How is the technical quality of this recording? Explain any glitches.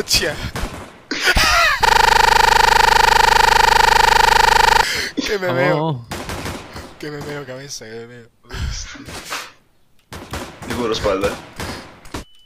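The recording has one glitch, a system hang loop, from 1.85 to 4.83 s. The computer or driver stalled while the sound hardware kept replaying the same 40 ms buffer, some 75 times over. That exact repetition at 25 Hz replaces the sound with a rough, steady buzz.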